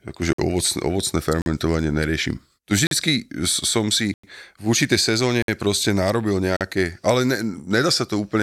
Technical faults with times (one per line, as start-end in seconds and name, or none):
0.33-0.38 block of digital silence
1.42-1.46 block of digital silence
2.87-2.91 block of digital silence
4.14-4.23 block of digital silence
5.42-5.48 block of digital silence
6.57-6.61 block of digital silence